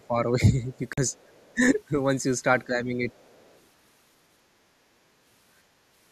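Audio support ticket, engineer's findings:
Echo canceller, likely confused by double talk, ducks near-end speech: 0–0.68 s, 1.54–1.62 s, 2.66–2.93 s. Level dips of about 5 to 15 dB.

Bluetooth link, likely late packets discarded: 0.93–0.98 s. 43.5 ms silent gap, consistent with roughly three lost packets; audio resumes further along.

Echo canceller, likely incomplete cancellation: far-end voice leaking through at 1.09–1.54 s and 3.09–3.59 s. Very faint, about 40 dB under the talker.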